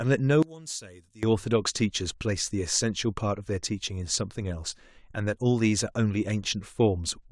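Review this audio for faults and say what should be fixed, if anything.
One channel inverted, from 0.43 to 1.23 s: the speech suddenly drops by about 17 dB to a faint copy, then returns at full level. The likely cause is reversed polarity on one stereo channel for that stretch. When the channels are summed to mono, the centred voice present in both cancels itself out, and only the small difference between left and right remains. To prevent it, check channel polarity with a phase-correlation meter or a mono fold-down before export.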